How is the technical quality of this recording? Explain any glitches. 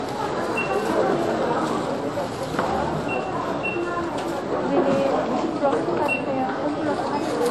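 The recording has one fault, and it runs through the whole clip. It is low-bitrate audio saved at a high bitrate. Nothing is heard above about 15.6 kHz, and the top end sounds dull. The likely cause is an earlier low-bitrate encode that discarded that detail. Resaving it as a high-bitrate MP3 enlarged the file but could not bring any of it back.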